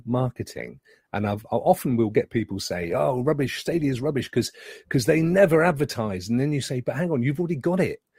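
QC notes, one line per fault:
0.0 to 6.0 s, adaptive stream starting at a low bitrate: the speech opens dull, with thin or synthetic treble and heavier codec artefacts, which fits a 24 kbit/s Opus start. It then steps up without a gap to a fuller sound fitting 64 kbit/s, improving rather than dropping.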